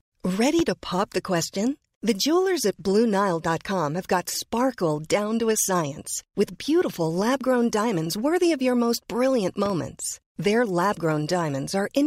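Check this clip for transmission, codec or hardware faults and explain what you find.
The speech is interrupted by two loud pops. At 0.59 to 0.62 s a single sharp pop stands around 10 dB above the speech. At 9.66 to 9.73 s two pops follow in quick succession, around 5 dB above it. The speech carries on beneath both. The likely cause is a sudden voltage step or pulse entering the signal, from a plug, a switch, static or a driver glitch, which the following circuitry shapes into an audible pop.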